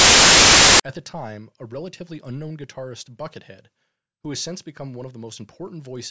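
A hard-edged burst of very loud white noise fills the opening of this speech recording, from 0.0 to 0.8 s, cutting off abruptly just before "at the time a". It is file tags played as audio: an embedded cover picture's compressed bytes decoded as samples.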